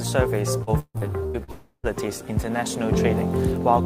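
Choppy, robotic sound runs from 0.63 to 1.51 s: repeated packet loss, six gaps up to 152 ms, each patched by stretching the preceding sound. From 1.52 to 1.86 s the sound smears into a fading buzz or hiss and then about 90 ms of silence, likely a long network dropout.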